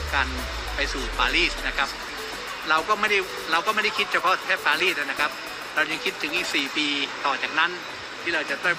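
No technical faults are audible.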